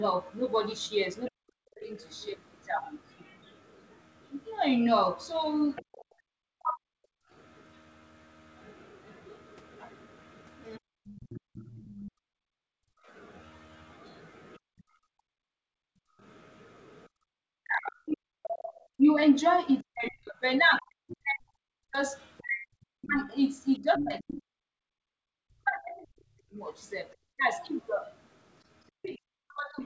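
From 1.26 to 6.05 s the echo canceller likely left part of the loudspeaker signal in the microphone feed, so the other side's voice leaks through as a second voice about 20 dB below the talker. Inside that stretch, from 1.3 to 1.91 s, speech is suppressed in double talk. With both sides active, the canceller likely could not tell its own talker from the echo and pulled the level down, so the voice dips by as much as about 40 dB and loses pieces over roughly half a second.

Right after the leak ends, from 6.05 to 7.31 s, the background is gated by the echo canceller. The canceller clamped the microphone hard while the loudspeaker played, and the room sound drops by up to about 40 dB for around 0.3 s before it returns. Between 6.53 and 6.93 s the talker's voice is likely suppressed again by double-talk handling and cuts out for about 0.4 s.

The leak likely returns from 9.31 to 12.11 s, again around 20 dB down. 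A brief double-talk dip between 10.78 and 11.02 s takes about 0.2 s out of the voice. From 11.4 to 16.21 s the canceller's gating hollows out the background for about 2 s in total, with drops near 40 dB.

From 15.13 s to the end, double-talk suppression likely keeps cutting into the voice, removing roughly 7 s in scattered pieces. From 19.81 to 24.39 s the leaking far-end voice is strongest, only about 10 dB below the talker. Throughout the clip, nothing above 8 kHz comes through the G.722 call path.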